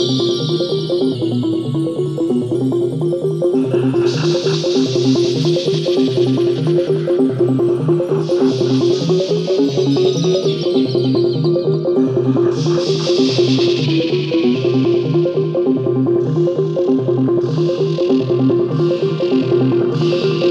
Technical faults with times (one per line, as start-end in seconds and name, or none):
1.15-2.55 drift correction step
8.93-10.47 drift correction step
13.84-14.54 drift correction step